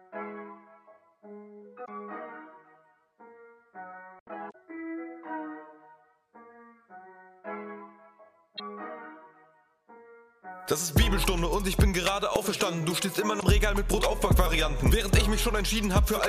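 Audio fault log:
1.82–1.89 s, 4.48–4.55 s, 8.53–8.60 s and 13.36–13.43 s: damaged data in a compressed stream. Each is a short disturbance of about 70 ms that breaks the sound. Corrupted bytes in the encoded stream leave the decoder unable to read those frames. It loses frame sync, emits garbled output or drops the frames, then resumes at the next valid frame header.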